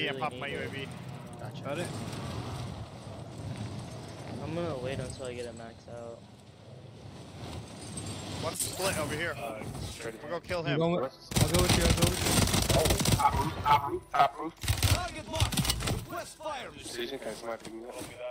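No technical faults can be heard anywhere in the recording. The sound runs without any break, dropout or disturbance from beginning to end.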